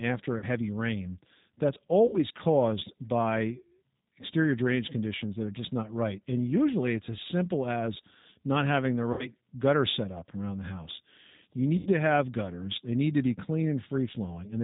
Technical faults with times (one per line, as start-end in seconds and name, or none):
0.00-14.63 G.729 codec
0.38-0.44 VoIP packet loss concealed by the speech codec
2.07-2.19 VoIP packet loss concealed by the speech codec
9.13-9.29 VoIP packet loss concealed by the speech codec
11.77-11.89 VoIP packet loss concealed by the speech codec